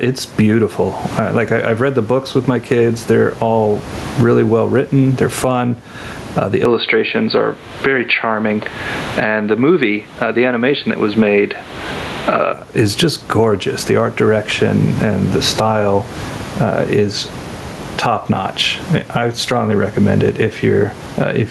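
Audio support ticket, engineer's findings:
Gain pumping, whole clip. Gain swings by around 20 dB. Likely cause: input gain set far too high with a fast limiter/compressor clamping peaks. Unlike plain room noise, which sits steady about 31 dB under speech, this rises and falls with the speech envelope. Dynamics squashed flat.

Input switched to a poorer device, 6.65 to 12.53 s. Sound goes dull and boxy with nothing above 4.6 kHz, level shifts by about 5 dB, and a different noise floor appears about 35 dB below signal. Likely cause: capture moved to another mic or a headset call profile, then back. No silence at either switch. A codec bandwidth drop would cut the top end without changing tone, level and noise together.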